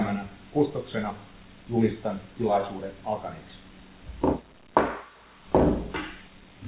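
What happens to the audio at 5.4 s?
Nothing goes wrong at 5.4 s: the audio carries on intact through that moment, still band-limited to below about 4 kHz by the G.711 A-law call path it travels through.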